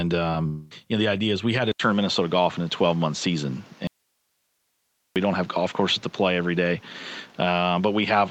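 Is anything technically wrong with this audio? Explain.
Yes, there are four faults.

At 0.31 to 0.35 s there is short concealed packet loss. About 20 ms never arrived. The receiver extended the preceding sound to cover it, leaving a brief smear.

From 0.47 to 0.73 s, a long network dropout is the likely cause. Roughly 0.24 s went missing. A synthetic continuation fills it and fades, with no full silence.

At 1.72 s the input likely switched to a poorer device. An 80 ms silence marks the switch. From there to the end, nothing sounds above 7.6 kHz and a new noise floor sits about 30 dB down, with the level roughly unchanged.

From 3.87 to 5.16 s, the likely cause is an audio dropout to a faint residue. The signal cuts out abruptly for 1.29 s. Only hiss remains, about 50 dB below the normal level.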